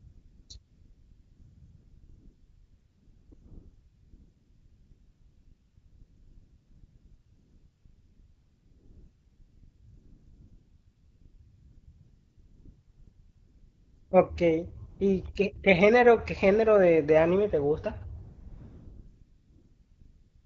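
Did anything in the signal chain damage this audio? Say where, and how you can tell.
Yes. AMR comfort noise (call processing, discontinuous transmission) fills 0.0–0.49 s, 0.57–3.31 s, 3.33–14.11 s, 14.89–14.99 s, 15.33–15.35 s and 18.23–20.45 s. The phone stopped sending speech frames, and the receiver synthesised smooth, steady noise from a coarse level-and-spectrum description, so the real background switches in and out.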